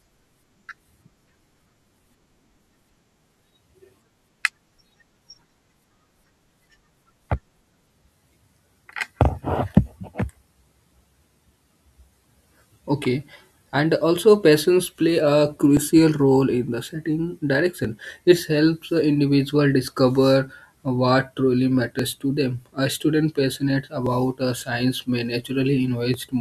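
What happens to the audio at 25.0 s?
At 25.0 s the speech is inside a run of regular clicks lasting from 1.27 to 26.14 s, recurring every 2.07 s. These are likely clock drift buffer slips. Mismatched device clocks drop or repeat a small block of samples.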